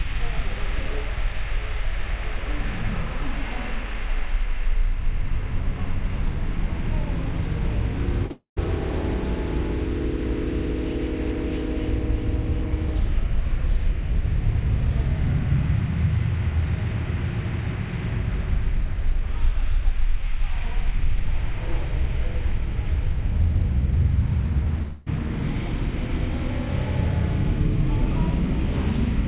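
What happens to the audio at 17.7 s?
Nothing goes wrong at 17.7 s: the sound passes through the call path normally there, with its top end stopping at about 4 kHz as expected for narrowband telephone coding.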